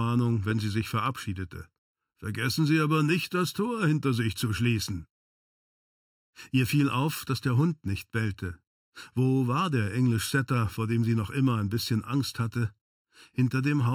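Right through the clip there's channel delay (comb filtering): one side lags by under a millisecond, so the mono sum cancels at evenly spaced notches starting around 700 Hz, sounding hollow and phasey.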